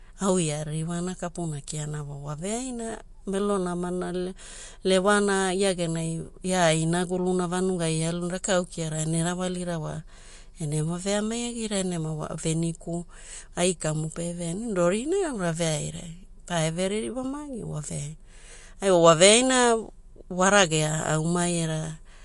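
From start to finish the speech carries plainly audible codec damage, likely from MP3 compression at a low rate, which fits roughly 48 kbps. Nothing remains above 11.2 kHz, where the encoder has cut the treble to save bits. Unlike a simple low-pass filter, the damage also moves: weak frequency lines drop in and out from frame to frame, giving a watery, swirling texture, metallic chirps on s sounds, and smeared attacks.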